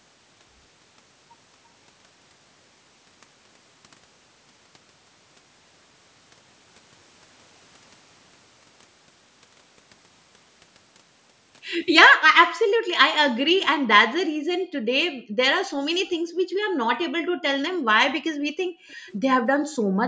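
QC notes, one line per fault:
12.52–12.88, 14.59–14.83, 15.10–15.37, 16.17–16.78, 17.23–17.43, 18.66–19.07 and 19.53–20.0 s: background gated by the echo canceller. The room tone ducks by about 40 dB for a few tenths of a second each time, because the canceller clamps the mic hard while the far end plays, then lets it back up.
18.91–19.16 s: echo leak. A faint delayed copy of the speech sits roughly 340 ms behind, about 30 dB down. It's likely loudspeaker pickup the canceller didn't fully remove, so a quiet trailing ghost slips through right around the 18.66–19.07 s gating dip.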